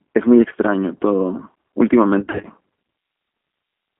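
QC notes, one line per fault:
throughout: G.729 codec. The whole clip has that low-rate CELP sound, a bit rough and synthetic, which fits an 8 kbit/s G.729A coder rebuilding speech from a filter, a pitch predictor and a few pulses per frame. The band is squeezed to roughly 200 Hz to 3.4 kHz, so the top end and the bottom are both gone, and the coding damage is plainly audible rather than subtle.
2.20 to 2.47 s: VoIP packet loss concealed by the speech codec. About 170 ms of audio went missing, scattered across roughly 240 ms, with the longest single gap around 50 ms. The decoder fills each hole by stretching its last pitch and filter state, so you get brief buzzy, smeared stretches instead of silence. Because each frame builds on the one before, the sound stays thin and a bit warped right through this span.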